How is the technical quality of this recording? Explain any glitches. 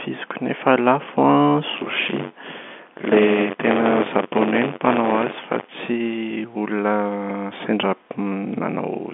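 The recording has one clear fault, buffer tearing in the speech between 1.76 and 5.69 s. It sits on a telephone-band line, and nothing above about 3.7 kHz comes through.

From 1.76 to 5.69 s, the playback buffer and the program filling it have drifted out of step. Each time they cross, a small slice of every buffer, roughly a sixth, is audio from a few tens of milliseconds earlier, with hard joins on both sides. The joins repeat at 93.8 Hz, which fits a 512-sample buffer. The result is a steady robotic buzz riding on the speech. It is present only while there is signal.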